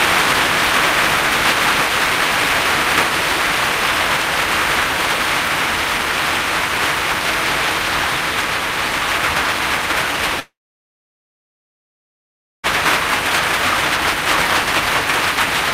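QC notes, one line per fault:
1.03 to 4.51 s, periodic USB or driver dropouts: small regular ticks about every 0.1 s, around forty in all, heard only while sound is present. Something blocks the audio driver or USB bus at a fixed interval, and each time roughly half a millisecond is skipped outright.
10.40 to 12.65 s, long network dropout: the sound briefly smears into a fading buzz, then goes silent for about 2.1 s before returning further on. This is likely a stall in the incoming stream, leaving 2.24 s of audio never played.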